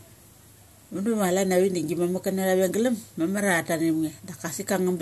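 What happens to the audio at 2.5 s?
Nothing goes wrong at 2.5 s: the speech carries on intact through that moment, with no dropout, click or other fault.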